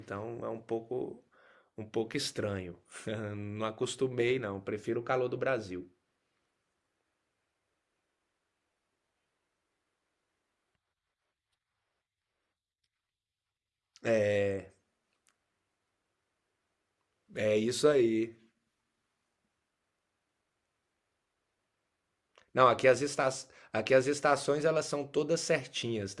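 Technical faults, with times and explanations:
No technical faults are present.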